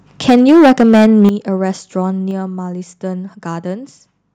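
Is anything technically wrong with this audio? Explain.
Yes. There are two related faults, both in the first second and a half of this speech clip.

From 0.28 to 1.29 s there is microphone overload. The peaks are flattened, and the loudest syllables take on a harsh, crackly edge. About a fifth of the samples sound clipped. The signal seems to run about 10 dB past full scale. The likely cause is a microphone input set too high, so the converter hits its ceiling and cuts the waveform tops off.

The microphone volume is also stepped down twice. At 0.3 s the whole level drops by about 3 dB. At 1.3 s it drops again, by about 10 dB, and the distortion stops there. Voice and background fall together, which points to a gain change rather than a change in how the talker speaks. The likely cause is call software that detects clipping and lowers the device's input volume in single steps.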